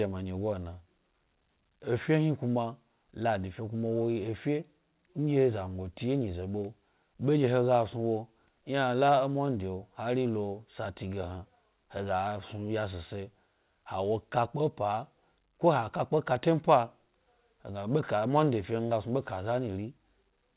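No technical faults are audible.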